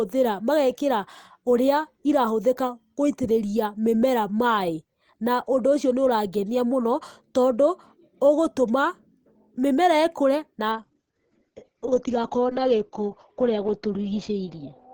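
From 10.72 s to the end of the clip, the speech turns muffled and rough, with a watery, smeared texture and none of the earlier high-frequency detail. This is a call bitrate drop: the call's bandwidth estimate fell and the encoder cut its rate from 32 kbps to 9 kbps for the last 4.2 s. At that rate the audio is coded far more coarsely, and the bandwidth shrinks from 20 kHz to 6 kHz, which removes the brightness above that point.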